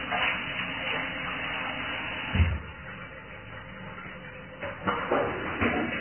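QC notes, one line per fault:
Throughout: heavy Vorbis compression. Nothing is present above 3.1 kHz, so the treble is gone and the remaining upper band turns hissy and grainy. Tones sound roughened and attacks are smeared, likely because the residue over the spectral floor was quantised very coarsely, which fits a very low bitrate around 11 kbps. On a spectrogram there is a hard horizontal ceiling at 3.1 kHz with speckled, blotchy texture beneath it, and the waveform shows softened transients.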